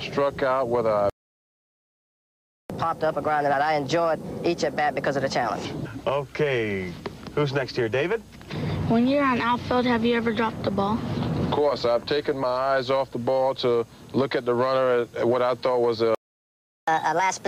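The audio cuts to silence mid-flow from 1.10 to 2.70 s and again from 16.15 to 16.88 s, a playback stall most likely caused by the player running out of data or its thread being blocked. After each gap the sound resumes noticeably fast and high: from 2.70 to 5.65 s it runs at 1.25 times speed, roughly four semitones sharp, and from 16.88 s to the end at 1.5 times, around seven semitones up. This is catch-up at higher speed, resampling to work through the backlog. At 3.52 s and 12.42 s the sound jumps forward where compressed frames were skipped. The first jump loses about 50 ms, roughly two frames, and the second about 20 ms, around one frame.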